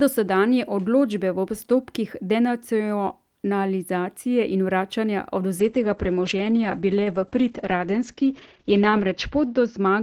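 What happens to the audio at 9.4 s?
At 9.4 s the speech is inside a call bitrate drop running from 5.63 s to the end at 10.02 s. The encoder's rate falls from 40 to 9 kbps, coding more coarsely and cutting bandwidth from 20 kHz to 8 kHz, so the speech sounds rough and muffled.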